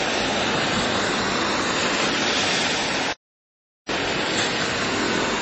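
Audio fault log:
throughout, low-bitrate audio saved at a high bitrate: nothing above 8.2 kHz and smeared, swirly artefacts remain, likely from a 32 kbit/s MP3 re-encoded at high bitrate, which restores nothing.
3.13 to 3.89 s, playback stall: the sound halts for about 0.76 s, likely from the player running out of data.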